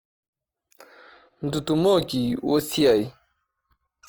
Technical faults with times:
0.00-4.08 Opus compression

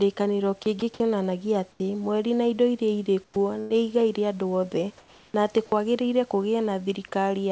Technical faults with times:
0.80-1.00 sound dropped by the voice detector
1.72-1.80 comfort noise in place of the background
1.77-1.80 onset clipped by the voice detector
3.24-3.36 comfort noise in place of the background
3.60-3.72 burst of packet loss
4.98-5.34 comfort noise in place of the background
5.66-5.72 sound dropped by the voice detector

